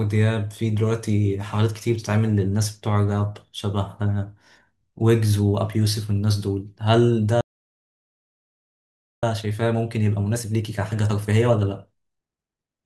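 Speech clip with a playback stall from 7.41 to 9.23 s, where the sound cuts out mid-flow for about 1.8 s, likely because the player's buffer ran dry or its thread was blocked. From 9.23 to 12.23 s comes time-compressed catch-up: the audio runs about 1.1 times fast at normal pitch, as small cross-faded cuts shorten the backlog.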